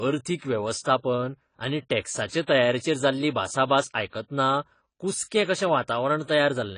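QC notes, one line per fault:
Throughout: AAC compression. The speech has plainly audible codec damage, with nothing above 10 kHz, so it comes across dull and smeared. That points to likely AAC-LC coding at a low rate, fitting around 24 kbps, where the encoder pulls the cut-off down to save bits.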